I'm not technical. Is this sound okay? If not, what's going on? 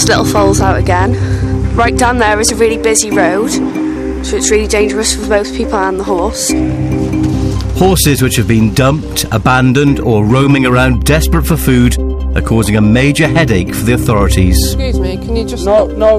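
No. There is hard clipping from start to finish. The sound is louder than the recording chain could handle, so its loudest moments get their tops sliced off flat. Only a small fraction of the audio is affected, just the brief peaks. Those flattened peaks add a harsh crackle, a gritty edge that jumps out whenever the sound gets loud. The quieter parts in between are not cut.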